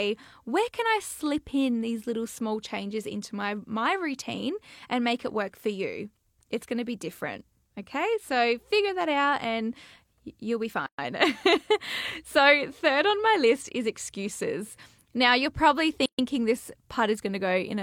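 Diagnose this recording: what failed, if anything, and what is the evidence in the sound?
The speech breaks twice with a gap at a join of encoded pieces, a codec-stage fault from joining separately encoded segments without trimming. Silence opens at 10.86–10.99 s (about 120 ms) and at 16.06–16.19 s (about 130 ms), then the speech resumes exactly where it stopped. The encoder's start-up delay and last-frame padding were left in. A spectrogram shows blank vertical bands across all frequencies; the waveform drops flat, with edges softened by the codec.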